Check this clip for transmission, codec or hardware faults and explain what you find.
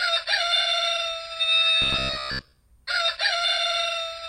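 One fault is present. From 1.82 to 2.59 s, robotic sound from repeated short buffers: a rigid 66.7 Hz buzz, likely from a 15 ms buffer replayed in place of most of the missing audio.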